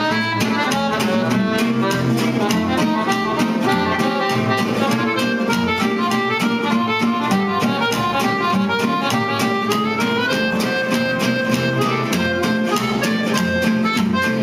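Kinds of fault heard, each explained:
Nothing stood out on listening; no technical faults could be heard anywhere in the audio.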